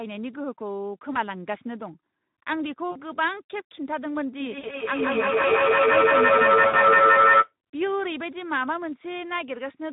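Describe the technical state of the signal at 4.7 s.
At 4.7 s a feedback echo between two devices is active, running from 4.4 to 7.56 s. A second device replays this microphone's audio, and the microphone picks it up again, so each sound returns about every 150 ms. The repeats peak about 11 dB above the direct sound and pile up rather than fading. Unlike room reverberation, the echo comes as distinct, evenly spaced copies that grow thinner and more ringing.

The moment falls just after VoIP packet loss concealed by the speech codec, from 4.59 to 4.68 s. About 40 ms of audio was lost, which fits two 20 ms frames. The decoder bridged the gap by extending its last pitch and filter at falling gain, producing a buzzy tone or coloured noise that fades instead of silence. Because each frame builds on the previous one, the sound at 4.7 s is still weak or distorted as the decoder recovers. This lingering tail distinguishes it from a plain dropout.

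Underneath both, the Speex codec at 11 kbps leaves plainly audible damage. Its CELP model has few bits for the excitation, so the sound turns noisy and hoarse. This is a rasp built into the sound itself, not the swirly, watery artefacts of a music codec.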